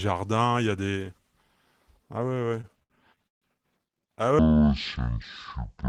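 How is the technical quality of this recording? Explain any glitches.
Two clear glitches in this speech recording, both after the first two seconds.

Repeated stalls (stutter) from 2.29 to 3.44 s: packets kept arriving late, so playback stretched the last sound through over a dozen short holds, the longest 141 ms, about 330 ms in all. Nothing's lost, but it drags and jerks.

Section at the wrong speed from 4.39 s to the end: it's playing at 0.5x, likely from being clocked against the wrong rate, so the speech turns slow and drops by nearly an octave.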